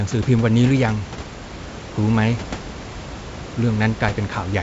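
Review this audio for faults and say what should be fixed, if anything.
Nothing to fix: the speech sits about 14 dB above the room noise, and the G.722 wideband coding at 64 kbit/s tops out near 7.7 kHz.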